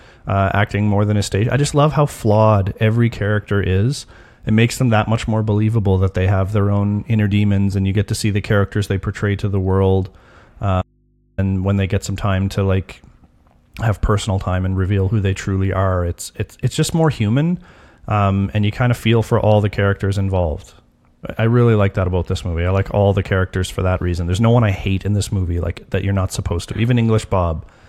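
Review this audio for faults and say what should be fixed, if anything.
Audio dropout to a faint residue, 10.82 to 11.38 s: speech cuts out abruptly, leaving only mains hum about 40 dB down, likely from a briefly open input. Check and secure every connector and cable between source and input before recording so the signal cannot break while the input stays live.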